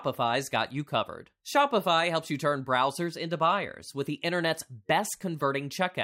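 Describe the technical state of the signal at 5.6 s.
At 5.6 s the speech signal is intact, with no dropout, distortion or other fault to be heard.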